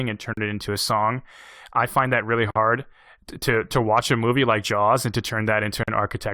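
This speech clip has three short silences where the sound should run on. They fall at 0.33 to 0.37 s, 2.51 to 2.56 s and 5.83 to 5.88 s. Each lasts about 40 to 51 ms. Each is a gap at a join of encoded pieces. The audio was encoded in separate sections and joined untrimmed. Each encoder's start-up delay and final-frame padding stayed in as dead air. The codec smears the edges. Speech then resumes where it stopped.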